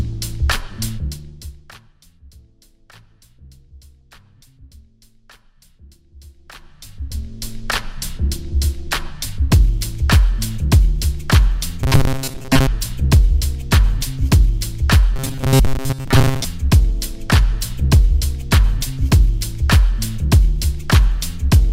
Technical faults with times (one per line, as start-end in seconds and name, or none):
6.15-7.57 zipper noise
11.83-12.67 robotic sound from repeated short buffers
15.16-16.45 robotic sound from repeated short buffers